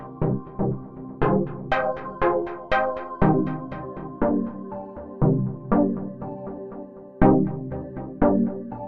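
No technical faults can be heard anywhere in the recording.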